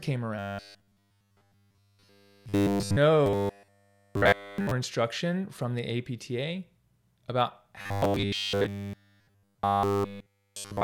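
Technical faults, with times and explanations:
0.39–2.97 s, 3.26–4.71 s and 7.81–10.83 s: robotic sound from repeated short buffers. The speech becomes a stiff, metallic 100 Hz buzz that loosely tracks the syllables, likely from a roughly 10 ms chunk replayed over and over while fresh audio was nearly all skipped.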